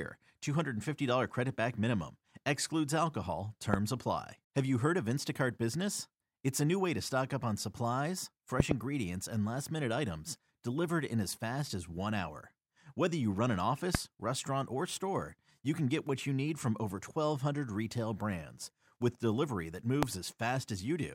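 Loud pops strike at 3.74, 8.6 (a double), 13.95 and 20.03 s, likely voltage glitches, appearing as full-band vertical spikes about 20 to 25 dB above the speech.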